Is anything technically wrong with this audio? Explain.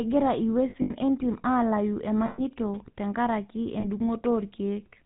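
Yes. The speech has been through the GSM full-rate codec for its whole length, and it has three patches of lost GSM frames on top of that.

The codec damage is plainly audible. Nothing above 4 kHz survives. The voice carries a buzzy, gravelly grain, because the coder rebuilds speech from a vocal-tract model fed by a sparse, regularly spaced pulse train rather than the real waveform. That roughness, rather than the smeared, watery swirl of a modern low-bitrate codec, points to the 13 kbps full-rate coder.

The lost GSM frames fall at 0.70–0.91 s, 2.26–2.41 s and 3.80–3.85 s. In each, the decoder keeps reusing the last good frame's settings, so the sound freezes into a rough, metallic ring instead of cutting to silence as a plain dropout would. The first patch is broken up: about 120 ms is lost across 200 ms, and the longest run is roughly 70 ms. The second loses 120 ms, which fits six 20 ms frames. 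The third is a brief 40 ms.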